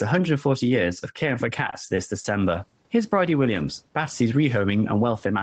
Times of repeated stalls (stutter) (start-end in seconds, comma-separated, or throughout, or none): 1.57-2.25